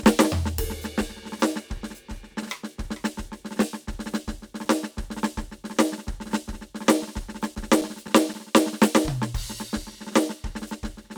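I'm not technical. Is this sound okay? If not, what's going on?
No. Between 7.03 and 8.60 s this music has CD scratch ticks: seven tiny evenly spaced clicks, each lasting only a few milliseconds. A scratched disc loses data once per rotation, so unlike random vinyl crackle, these clicks repeat at a steady rhythm.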